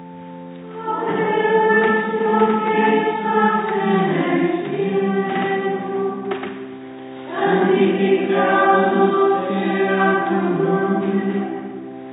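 No technical faults turn up anywhere in the recording.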